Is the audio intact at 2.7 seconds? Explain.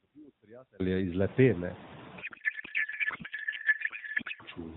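No. At 2.7 s the speech has given way to garbled noise and warble that barely tracks it. This is a codec payload misread running from 2.22 s to 4.43 s. The AMR frames were packed one way, octet-aligned, and read as bandwidth-efficient. The decoder therefore pulls its parameters from the wrong bit positions and synthesises plausible-looking but meaningless frames. The damage holds until the two sides agree on packing again.

The same moment also carries noise suppressor artifacts, present through the whole clip. The background, which has risen since roughly 1.5 s, is being pulled down by about 6 dB. The suppressor judges each band frame by frame, so the noise floor dips and lifts rather than sitting still. Those frame-by-frame decisions about what counts as steady noise cause the uneven level of the remaining noise.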